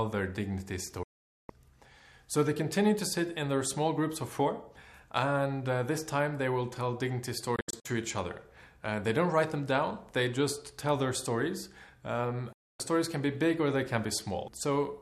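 Three digital broadcast dropouts chop holes in this audio. At 1.03 s it snaps to silence for nearly half a second, back at 1.50 s. Between 7.56 and 7.86 s it stutters through several short mutes, the longest about 72 ms. At 12.53 s it cuts again until 12.80 s. Each mute comes in with a 3 ms fade, the kind a receiver applies when it loses sync or gets failed-checksum frames. Whatever was broadcast in those gaps is gone.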